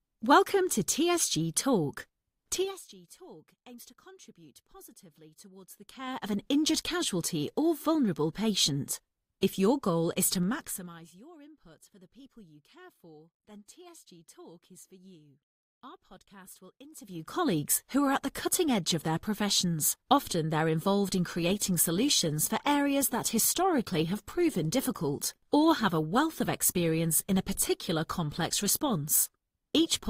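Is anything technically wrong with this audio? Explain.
Yes, there are two problems in this speech clip.

First, zipper noise shows up three times. From 2.51 to 2.88 s the level falls by roughly 25 dB. From 5.67 to 6.41 s, between "aims to contribute positively" and "injured casualty or vulnerable", it climbs back by about the same amount. From 16.90 to 17.37 s, after "podcast will" and before "who are at the", it rises again. Each move happens in unsmoothed 2 dB jumps, at around 30 a second in the first and third cases and about 15 a second in the second. Every jump leaves a tiny click, so you hear a ticking or zipping layered on the voice while the level travels.

Second, from 21.18 s, right after "they're involved", to the end, an adaptive stream drops to a lower bitrate. The quality shifts suddenly with no gap, and codec artefacts rise. That sound points to a switch from around 64 kbit/s Opus down to roughly 24 kbit/s, the kind of step down a player makes when the connection slows.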